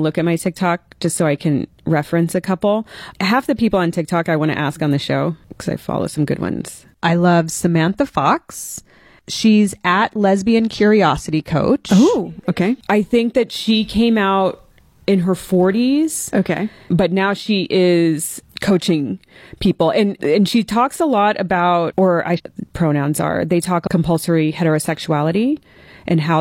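Damaged data in the compressed stream makes the decoder misread two short runs of frames and lose sync until it finds the next valid frame header. Each time this produces a brief glitch in the speech. The first, between "lot about or I" and "pronouns are", lasts from 22.34 to 22.40 s. The second, from 23.83 to 23.88 s, is a shorter blip of the same kind.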